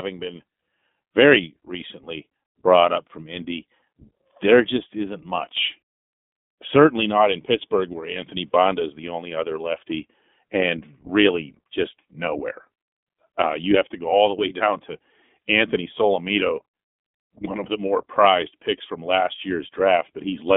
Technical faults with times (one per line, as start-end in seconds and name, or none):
0.00-20.56 iLBC codec